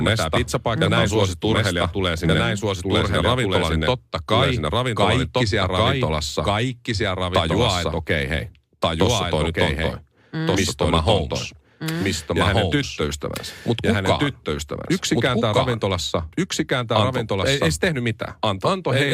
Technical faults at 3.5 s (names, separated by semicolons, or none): doubled audio track